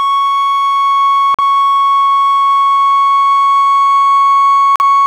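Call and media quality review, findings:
Music briefly cuts to silence at 1.34–1.40 s and again at 4.76–4.81 s, then resumes mid-programme. Digital broadcast dropout: receiver muted on corrupt or missing frames. Each hole fits a single lost frame of roughly 43 ms, and that content is gone.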